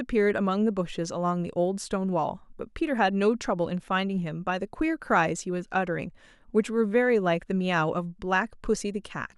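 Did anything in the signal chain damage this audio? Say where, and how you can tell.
No, nothing in the chain has audibly damaged this speech recording: the signal stays continuous and stable throughout, with no sign of trouble at any stage from capture to playback.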